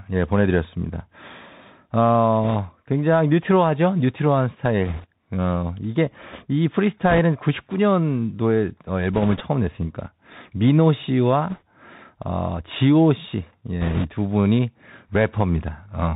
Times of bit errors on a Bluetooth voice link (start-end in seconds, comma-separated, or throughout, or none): 2.43-2.56, 4.85-5.06, 7.09-7.19, 9.13-9.41, 11.49-11.62, 13.81-14.09